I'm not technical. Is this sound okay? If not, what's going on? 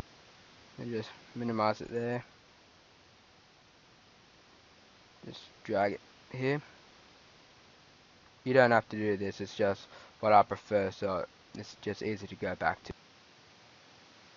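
Yes, this sound is okay. Nothing in it points to a technical problem that needs fixing.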